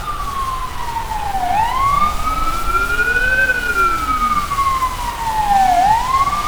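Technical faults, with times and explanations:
0.67 s to the end, periodic clock jitter: from here on the converter's sample clock is being wobbled at a steady rate of around 1 kHz, so every component of the sound picks up sidebands sitting that far above and below it. Higher-frequency content gets the strongest sidebands, which is why you hear a gritty, metallic edge riding on the brighter parts. It drops away whenever the sound goes quiet, since there's nothing for it to modulate.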